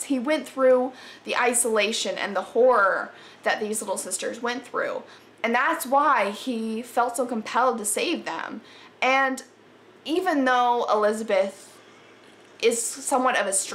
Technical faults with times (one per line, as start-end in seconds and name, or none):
10.17 corrupt frame decoded
13.11-13.14 corrupt frame decoded